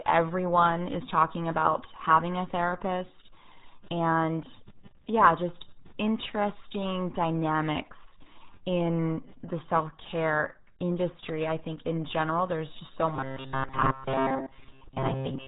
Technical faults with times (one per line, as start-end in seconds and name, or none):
0.00-15.47 RealAudio 14.4 codec
13.16-15.47 robotic sound from repeated short buffers